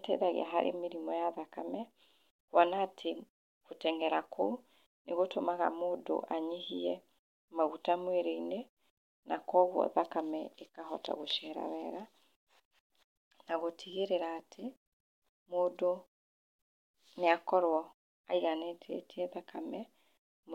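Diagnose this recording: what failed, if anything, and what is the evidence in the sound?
Nothing failed; no faults detected.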